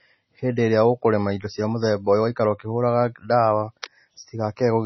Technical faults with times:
0.00-4.86 MP3 compression
3.82 pre-echo

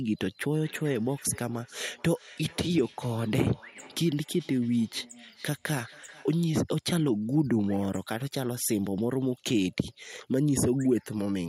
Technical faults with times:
0.60-6.39 feedback echo between two devices

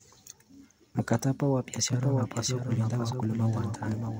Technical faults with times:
1.93-4.20 doubled audio track

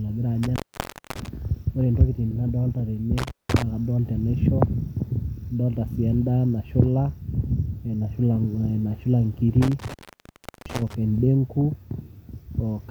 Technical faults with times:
0.43-1.28 intermittent contact
3.18-3.63 intermittent contact
9.62-10.94 intermittent contact

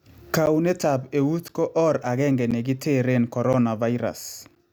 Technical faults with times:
0.46-4.56 periodic USB or driver dropouts

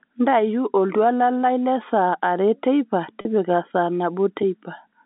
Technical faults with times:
3.21-3.25 packet loss with pitch repetition

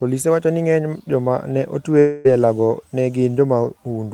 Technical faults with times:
1.99-2.27 long network dropout

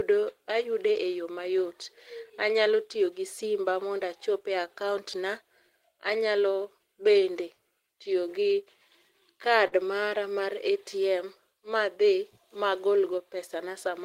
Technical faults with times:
9.67-9.77 short concealed packet loss

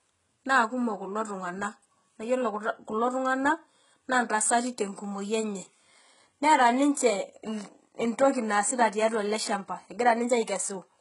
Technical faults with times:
0.00-11.00 HE-AAC compression
4.96-4.98 pre-echo

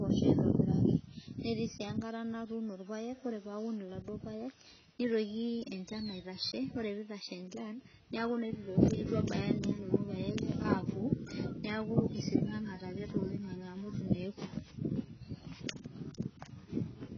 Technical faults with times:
0.00-17.17 AAC compression

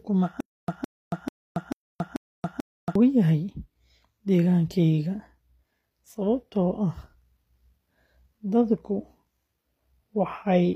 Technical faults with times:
0.00-10.76 HE-AAC compression
0.40-2.95 stutter with silent gaps

